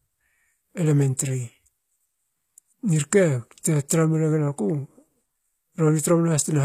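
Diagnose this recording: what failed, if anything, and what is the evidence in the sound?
HE-AAC compression, throughout the speech, at the codec stage. Damage is plainly audible: s sounds turn gritty, and nothing remains above 14.9 kHz. This is likely spectral band replication rebuilding the treble from copied lower bands, which fits a bitrate around 24 kbps.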